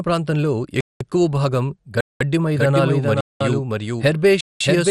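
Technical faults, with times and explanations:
Throughout, MP2 compression: the speech sounds dull and gurgling, with a granular roughness and nothing above about 14.3 kHz. This is likely low-rate MPEG Layer II coding, consistent with around 64 kbps. The coder divides the spectrum into 32 sub-bands and shares out a limited bit budget. The top bands are dropped entirely, and the remaining ones are quantised so coarsely that the grain and gurgle stay plainly audible.
0.81–1.01 s, 2.01–2.21 s, 3.21–3.41 s and 4.41–4.61 s, gap between chunks: the speech stops dead four times for 200 ms, with abrupt edges, then resumes exactly where it left off. The holes repeat every 1.2 s, fitting audio delivered in 1.0 s chunks with a fixed stretch of silence inserted at each join, as from codec padding or a player starting each chunk late. Nothing is missing. The flow is simply broken at regular intervals.
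2.54 s to the end, doubled audio track: from 2.54 s a second, full-band copy of the speech suddenly appears, trailing the original by roughly 400 ms and sitting about 5 dB lower. It has no reverberant tail or room colour, so it sounds like a clean, out-of-step duplicate rather than an echo. This is likely the same signal mixed in twice, either through a slower second capture path or an edit that left two misaligned copies.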